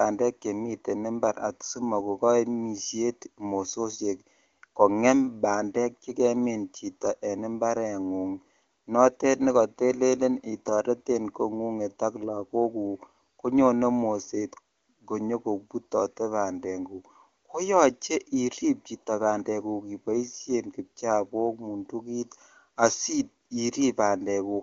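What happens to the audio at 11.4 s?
Nothing goes wrong at 11.4 s: the speech carries on intact through that moment, with the wideband AMR-WB coding at 23.85 kbit/s leaving no audible damage there.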